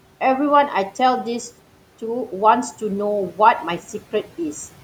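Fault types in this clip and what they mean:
No technical faults can be heard in this speech recording.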